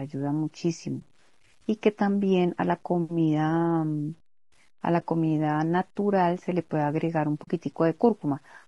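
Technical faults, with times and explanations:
Throughout: low bit depth without dither. Quiet stretches and decaying word endings sound gritty and grainy, and the grain rises and falls with the speech instead of sitting as a steady hiss. Low-level detail breaks into rough steps, with the error sitting around 40 dB below the speech. The likely cause is rounding to very few bits with plain truncation and no dither, which fits about 9-bit resolution. Because nothing randomises the error, it stays locked to the waveform as distortion.
Throughout: low-delay AAC compression. The speech has a rough, grainy quality. There is a hazy noise between the voice's harmonics, and the top band sounds dull and artificial rather than naturally bright. This points to AAC-ELD running at a low rate, around 32 kbps. Its very short frames separate pitch harmonics poorly and use bits less efficiently, so the encoder fills the gaps with noise and rebuilds the highs coarsely.
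0.99–1.02 s, 4.99–5.03 s, 7.43–7.48 s: AAC frame loss with muting. Each is a brief soft dropout where the speech fades down to nothing and back up. The first two gaps each lose 20 ms of audio. The last is a longer hole of 40 ms. At each point the decoder received nothing and zeroed the spectrum. The overlapping transform windows then taper the sound out and in, which leaves a smooth-edged hole rather than a hard cut.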